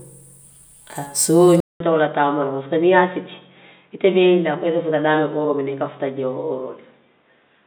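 At 1.60 s the speech drops out for 200 ms. It returns dull and boxy, with nothing above 3.8 kHz, until the end. A faint new background noise appears. The level barely changes. The input likely switched to a poorer device.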